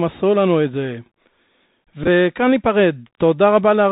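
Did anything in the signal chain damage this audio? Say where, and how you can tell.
Yes, in two places. Right through the clip the codec stage is a Bluetooth CVSD headset codec. Nothing above 4 kHz gets through, s sounds come out scratchy, and a granular hiss sits under the speech. The hiss comes from the one-bit up/down coding, which fits a 64 kbps CVSD link, and its adaptive step can't keep up with fast high-frequency movement. Plain telephone band-limiting would cut the top just as cleanly, but it wouldn't add this grainy noise or the slope-overload roughness on sibilants.

The second problem is on the radio link between headset and phone. A Bluetooth headset packet repeated fault runs from 2.04 to 2.07 s. About 18.8 ms of audio was lost, scattered across 37.5 ms, with the longest run about 15 ms, which fits roughly five lost packets. The chip replayed the previous packet's bits every 3.75 ms, and that gives a short buzz near 267 Hz. 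A plain dropout would leave a silent gap or a click. Here the gap is filled with a pitched buzz instead.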